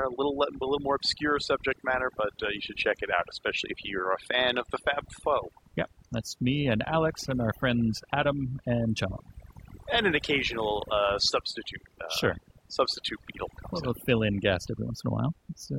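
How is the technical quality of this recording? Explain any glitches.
Technically it's let down by overdone noise removal, and that runs through the whole clip rather than hitting at any one moment. The noise reduction was pushed too hard, so any frequency band sitting close to its idea of the noise floor gets pulled right down or switched off, and the softer parts of the speech get caught too. You hear near-silent gaps with little twinkly specks in them.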